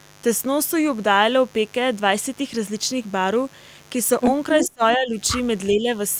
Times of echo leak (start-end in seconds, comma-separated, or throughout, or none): 4.63-4.96